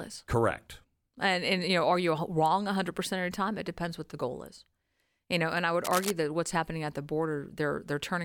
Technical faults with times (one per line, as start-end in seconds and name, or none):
5.84-6.12 cable scratch noise